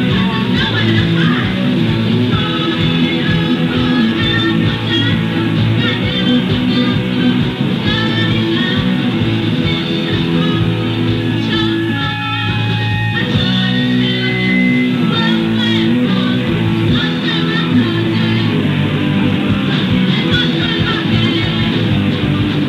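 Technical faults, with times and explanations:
Nothing stood out as a technical problem on listening.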